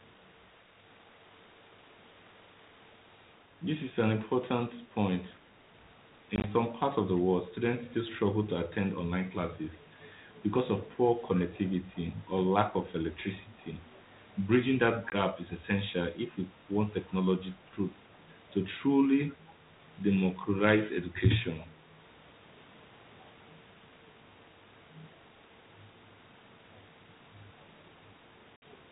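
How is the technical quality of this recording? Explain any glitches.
Speech over a G.726 ADPCM link at 32 kbit/s, band-limited below 4 kHz, is broken three times by packet loss on an ADPCM call.

At 6.36 to 6.46 s, about 50 ms of audio goes missing in short gaps spread over 80 ms, the longest lasting 20 ms. A handful of dropped packets become silence. The decoder's predictor and step size then lose track of the sender's, so the sound comes back slightly distorted.

At 15.10 to 15.14 s, 20 ms of audio from a couple of lost packets cuts out sharply. It resumes with slight distortion while the decoder re-adapts.

At 28.56 to 28.63 s, the largest loss, about 60 ms, drops out abruptly. Afterwards the decoder's mismatched state leaves the returning sound briefly distorted for a few tens of milliseconds.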